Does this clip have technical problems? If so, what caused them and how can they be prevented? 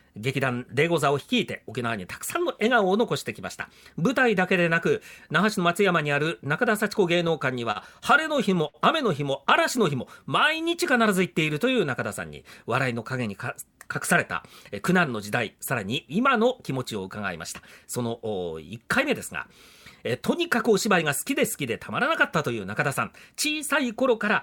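Yes. Between 7.27 and 7.78 s, and again between 8.23 and 8.77 s, the audio catches and drags in little hitches. These are repeated stalls (stutter). In each span, packets arrived late four times and the jitter buffer ran dry. The receiver stretched the last sound to bridge the waits: 60 ms in total in the first span and 86 ms in the second, with the longest single wait 62 ms. Nothing was lost, but the flow stumbles. A larger or more adaptive jitter buffer, and a network path with steadier delivery, would keep the buffer from emptying.

From 9.42 to 10.84 s the sound runs slightly slow and drawn out, at about 95% speed, while the pitch stays the same. This is a jitter buffer slow-down: with its reserve depleted, the receiver repeated single pitch periods, adding 75 ms to rebuild a cushion. Keeping the buffer's target steady and the network jitter lower would avoid this stretching.

At 12.93 to 13.86 s the audio sounds hurried, running at about 108% speed, and it speeds up again at 20.14 to 20.95 s, at a milder 104%. 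This is jitter buffer speed-up. Too much audio had piled up, probably after delayed packets arrived together, so the receiver cut out short pitch-period slices, roughly a tenth of a second in the first stretch and around 40 ms in the second. Smoother packet delivery would prevent the bunching that forces this catch-up.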